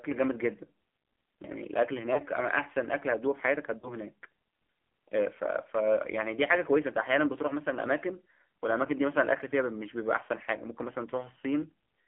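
AMR narrowband mobile codec runs through the whole recording. The speech is held to roughly 200 Hz to 3.4 kHz, with nothing above 4 kHz. The voice is rebuilt from a vocal-tract model excited by a few pulses per subframe, and with so few bits that reconstruction is coarse. The damage is plainly audible as a buzzy, synthetic edge on the voice, which fits a low AMR-NB rate around 7.4 kbps.

Lost AMR speech frames occur at 2.14 to 2.20 s, 3.78 to 3.90 s and 10.24 to 10.27 s. Each time, corrupted radio frames were discarded, and the decoder filled the gap by repeating its last good pitch and spectral settings at reduced gain. The first and last gaps are short dips or warbles that fit a single 20 ms frame. The middle one lasts about 40 ms, fits two consecutive frames, and sounds as a longer smeared sag.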